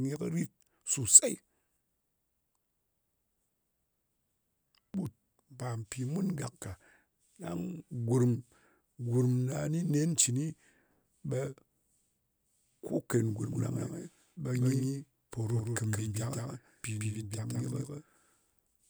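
Speech, and from 13.52 s, right after "ken gurm", every syllable is shadowed by a flat, full-band echo about 150 ms late and some 5 dB quieter, running to the end: a doubled audio track, likely from a second, slower capture path mixed in.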